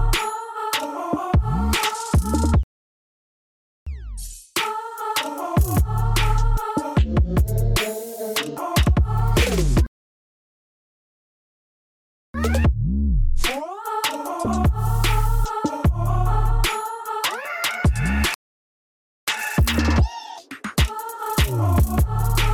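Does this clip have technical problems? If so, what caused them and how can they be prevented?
Yes, there are three rebuffering stalls: the sound drops to silence at 2.63 s until 3.87 s (about 1.2 s), again at 9.87 s until 12.34 s (about 2.5 s), and at 18.34 s until 19.28 s (about 0.9 s). Each time the player ran dry of downloaded audio, waited, then picked up right where it left off, so nothing's missing; the clip just runs longer. A bigger startup buffer, or adaptive bitrate that steps down before the buffer empties, would head these off.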